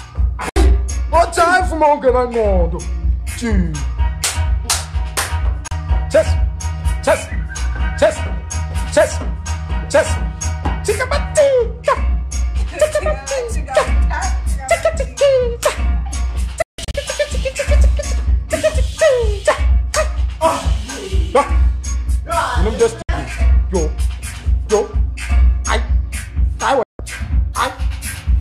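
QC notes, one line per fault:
0.49, 5.68, 16.62 to 16.95, 23.02 and 26.83 s, digital broadcast dropout: the receiver mutes through 3 ms fades when frames fail, losing 64, 32, 64 and 160 ms; at 16.62 s, 224 ms in holes over 320 ms. Waveform and spectrogram show clean silent gaps, full-band blank columns, consistent with 32 ms frames.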